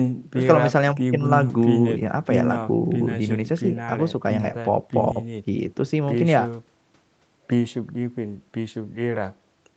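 No faults in this speech; the top end stops at 8 kHz, as expected from the call's microphone processing and a wideband call codec.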